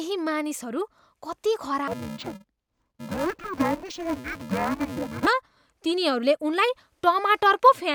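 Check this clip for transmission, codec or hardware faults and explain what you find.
One fault is present in the speech, from 1.88 to 5.27 s. It is interleaved audio read as planar. Each block of 128 samples, about 2.67 ms, holds alternating left and right samples. The first half was taken as left and the second half as right. Each channel then plays its slice at half speed, so the overall pace holds. Blocks this short give no clear octave drop. Instead the speech turns dull and robotic, with a buzz at 375 Hz, the block rate.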